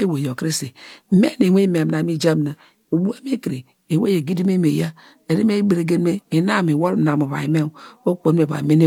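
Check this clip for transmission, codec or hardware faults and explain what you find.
Nothing in the speech signal points to any transmission, codec or hardware fault.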